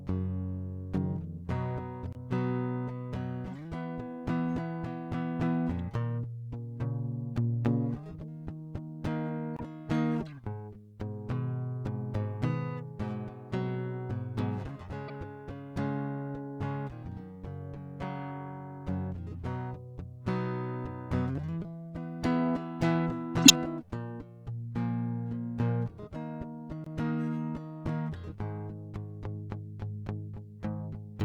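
A music clip with corrupt frames decoded at 2.13 to 2.16 s, 9.56 to 9.61 s, 15.08 to 15.12 s and 23.43 to 23.51 s. Flipped bits placed energy at the wrong frequencies, producing chirps or blips: faint at first, but loud at 23.43 s. On a spectrogram these appear as short, misplaced bursts. There is also a block of digital silence from 26.84 to 26.86 s: a 21 ms hole, which fits a 1024-sample buffer that was not filled in time. In the waveform it shows as a flat line with abrupt edges.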